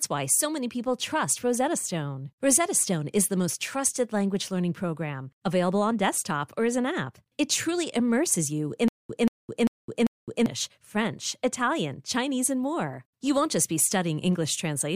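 Playback likely stalled from 8.88 to 10.46 s, causing stutter with silent gaps: a 184 ms fragment repeats four times between 211 ms silences.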